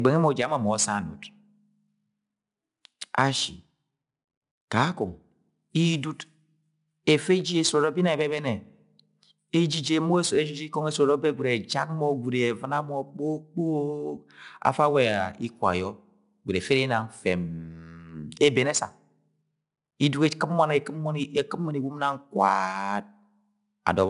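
Throughout the speech, 4-bit ADPCM compression leaves a gritty hiss that rises and falls with loudness and roughens sharp onsets. The coarse adaptive steps cannot track fast changes. A spectrogram shows level-following broadband noise and an empty band above 10.6 kHz, which fits a rate near 89 kbps.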